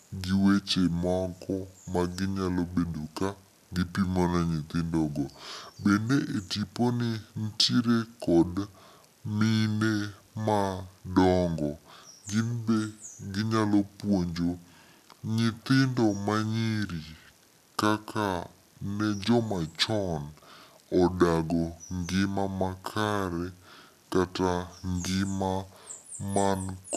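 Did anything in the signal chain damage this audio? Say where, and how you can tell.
Yes, at playback: a wrong sample rate throughout slows the speech to about two-thirds speed and drops pitch about 7 semitones together, which fits 48 kHz audio played at 32 kHz, not a pitch shift.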